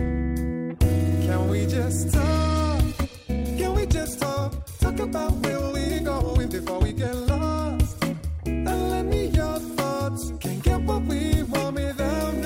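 Software likely squeezed a stretch of the audio to fit a shorter length, producing a time-stretched section from 2.90 to 7.60 s. The pace jumps to about 1.44 times normal while pitch holds steady, so the passage sounds rushed.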